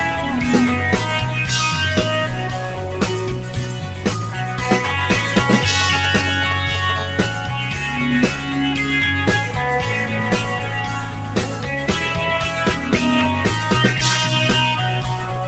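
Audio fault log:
Throughout: noise suppressor applied to music or sounds. A speech-tuned suppressor treats sustained parts of this non-speech audio as noise, so level swings by about 5 dB and sound pumps. On a waveform, the envelope breathes. On a spectrogram, held bands fade while onsets stay bright.
3.39–4.05 s: sound cut by the noise suppressor. Here the suppressor mistook the material for noise and pulled it down by up to about 4 dB over roughly half a second. Decays thin and shorten. The waveform shows a visible dip, and the spectrogram shows tails cut early.
5.81–6.91 s: GSM signalling bursts. A nearby 2G phone in its signalling state sent short groups of radio bursts, which the audio circuit rectified. The result is a galloping dit-dit-dit of short buzzes at 217 Hz, around 10 dB below the signal. The spectrogram shows clustered vertical stripes with harmonic stacks.
6.96–8.04 s: GSM phone buzz. 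The phone moved into a call and transmitted continuously at 217 bursts per second. That gives a hard, raspy buzz with dense harmonics, about 21 dB below the signal and unrelated to the audio. On a spectrogram, evenly spaced harmonic lines run steadily. On a waveform, a regular spiky ripple rides on top.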